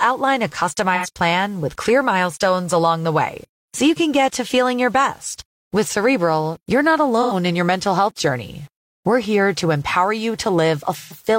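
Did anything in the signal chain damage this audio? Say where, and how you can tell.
Yes. A grainy, rasping texture sits on the speech for the whole clip and moves with it: it thickens on quiet syllables and decays toward a gritty sputter as words trail off, instead of sitting as a steady hiss underneath. The error is roughly 35 dB below the speech. This is low bit depth without dither, most likely from a sample-format conversion stage that rounded the audio to about 8 bits, so the quantisation error stays tied to the waveform.

Three short patches sound smeared and phasey, as if the speech briefly turns to a blurred, noisy copy of itself: 0.95 to 1.08 s, 7.22 to 7.33 s, and 10.96 to 11.17 s. The first two last about 85 ms, which fits two lost frames; the last runs about 128 ms, fitting three. This is AAC frame loss with concealment at the codec or network stage: the decoder filled each gap by reusing the last good spectrum with altered phase, which produces that smeared, unnatural patch.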